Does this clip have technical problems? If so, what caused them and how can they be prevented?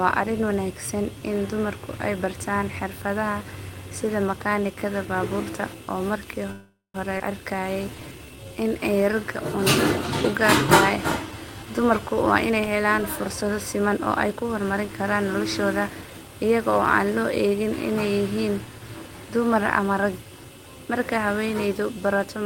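Yes. From 6.51 to 6.96 s a call audio freeze stops the speech: the last sound carries on as a fading buzz or hiss, then about 150 ms of near silence. On a waveform this is a decaying tail into a flat line; a spectrogram shows smeared, fading bands, then blankness. The likely cause is packets held up in transit, which emptied the jitter buffer. The speech then resumes where it stopped, with nothing lost and 0.43 s of delay added. Better network prioritisation for voice traffic and a somewhat deeper buffer would prevent this.

At 7.18 to 7.22 s a skip ahead jumps forward. Roughly a fifth of a second of speech is dropped, and the two sides are butted together with only a few milliseconds of fill. The waveform shows an abrupt splice, and the spectrogram shows harmonics changing instantly with no transition. Draining excess delay gradually rather than discarding a whole block would avoid it.

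From 7.56 to 9.33 s a jitter buffer slow-down stretches the speech to 88% speed by repeating single pitch periods, adding 212 ms. The pitch stays the same, but sounds are drawn out. A spectrogram shows elongated harmonic bands, and the waveform shows repeated identical cycles. Steadier packet delivery, or a buffer that already holds enough reserve, would remove the need to stretch.

From 11.64 to 15.26 s a jitter buffer speed-up plays the speech at 110% speed by removing short pitch-period pieces, shedding around 0.4 s. The speech sounds hurried at an unchanged pitch. The spectrogram shows compressed syllables and pauses, and the waveform shows tiny splices between cycles. Avoiding bursts of late packets, and letting the buffer adapt more gently, would prevent it.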